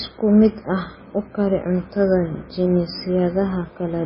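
Throughout the speech the sound is dull and watery, with nothing above 5.4 kHz, a swirling texture as faint detail flickers, and smeared onsets. This is likely heavy MP3 compression: a starved encoder, fitting roughly 16 kbps, drops the treble and weak frequency lines.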